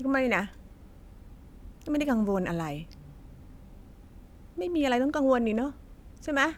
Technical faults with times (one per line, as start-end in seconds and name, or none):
none